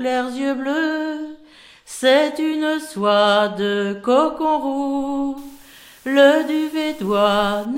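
From 5.38 s to 7.65 s a steady, even hiss sits about 30 dB below the signal, without distortion: low bit depth with dither, consistent with 8-bit rounding.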